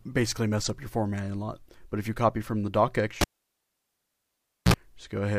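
The audio drops out at 3.21 s with a sharp pop, and it's a classic cable pulled and plugged in. For about 1.48 s there's near silence while the lead is out. Then, just before the signal comes back, there's a short 60 Hz mains buzz of roughly 52 ms, when only the plug's tip has made contact and the hum gets in unshielded. A second pop lands at 4.74 s as the connector seats fully and the sound returns.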